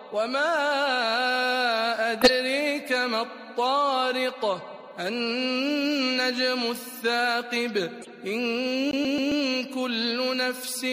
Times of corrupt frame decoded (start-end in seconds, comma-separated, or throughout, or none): 2.21-2.30, 8.00-8.09